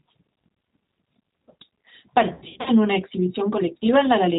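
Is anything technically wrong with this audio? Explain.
Yes. The whole clip has the slightly rough, synthetic quality of the G.729 codec, and the damage is plainly audible. Everything above 4 kHz is missing, so the speech sounds narrow and muffled. The codec runs at 8 kbit/s and does not send the waveform itself. It sends a vocal tract filter, a pitch predictor and a few pulses per frame, and the decoder rebuilds the sound from those. That rebuilding is where the rough, slightly artificial texture comes from.

From about 2.34 to 2.71 s there is VoIP packet loss concealed by the speech codec. The speech breaks up into stretched fragments, a buzzy tone or coloured noise that fades, and then recovers unevenly. About 220 ms of audio went missing, scattered over roughly 320 ms, and the longest gap was 80 ms. The decoder filled each gap by repeating its last pitch and filter at falling gain. 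Each frame depends on the one before, so the speech stays weak or distorted for a short time after the packets return.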